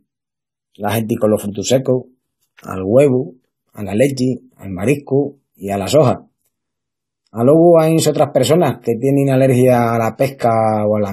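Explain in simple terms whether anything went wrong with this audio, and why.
AAC compression runs throughout the whole clip, and the damage is plainly audible. The speech sounds dull and smeared, with nothing at all above about 14.1 kHz, so the crisp top end is missing. The likely cause is saving the audio as an AAC file at a low quality setting. To save space, the encoder discards detail it judges least noticeable, starting with the highest frequencies. Too much was removed here.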